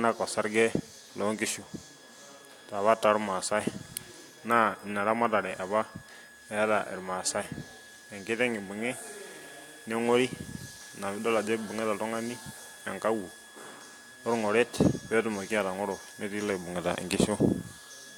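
Nothing stood out on listening to the speech in this recording.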